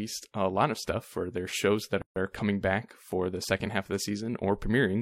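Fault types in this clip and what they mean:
gap at a join of encoded pieces: at 2.02 to 2.16 s, between "for their shows that" and "are coming back for", speech drops into a 145 ms silence with smeared edges, then resumes. Separately encoded pieces were joined untrimmed, keeping end padding and start delay.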